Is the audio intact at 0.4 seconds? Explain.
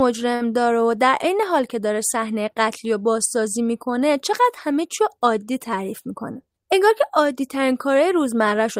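No. From 0.35 to 0.42 s the speech hangs on one sound, held about 50 ms too long with a faint buzz or dip. This is a short stall from a late packet: the jitter buffer ran dry, so the receiver stretched the last audio, then resumed with nothing lost.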